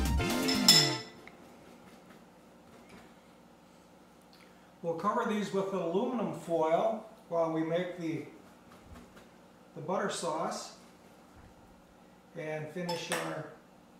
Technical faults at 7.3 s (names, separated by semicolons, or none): none